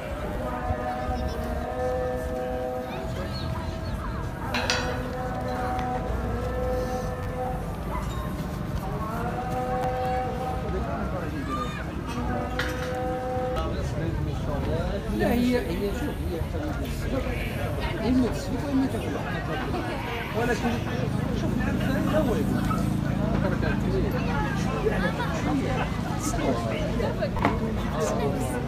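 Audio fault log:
0.33–0.35 s, 7.23–7.26 s, 9.83 s, 27.37–27.39 s: repeated buffer. Playback data arrived late, so the device replayed its last block two, three, one and two extra times with a hard join at each pass. The repeats fit a 10 ms buffer, so they are heard as brief clicks or buzzes rather than stutters.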